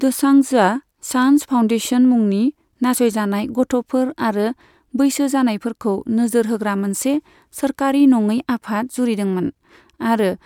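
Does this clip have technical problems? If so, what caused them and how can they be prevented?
No, no technical problems can be heard here.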